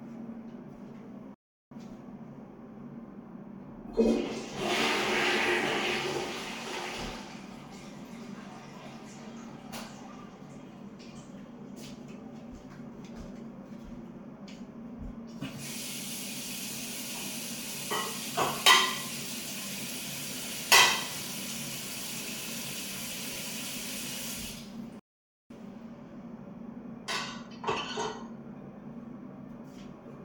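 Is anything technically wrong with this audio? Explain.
Yes, the sound cuts out twice and has one brief dropout of a different kind.

Playback stalls occur from 1.34 to 1.71 s and from 24.99 to 25.50 s, lasting about 0.37 s and 0.51 s. The audio goes fully silent mid-flow and then resumes. The likely cause is the player running short of data or its thread being held up. What separates these from a frame loss is their length, several hundred milliseconds, and that the silence is clean and abrupt, with no decaying residue leading into it.

Lost LE Audio frames occur at 23.34 to 23.36 s. About 20 ms went missing, which fits two 10 ms LC3 frames. The decoder filled the gap by repeating the last spectrum with randomised phase signs, so the sound briefly turns into a short noisy smear. It does not drop to silence. Because the gap is so short, the concealment never fades out, which is the clearest difference from the stalls.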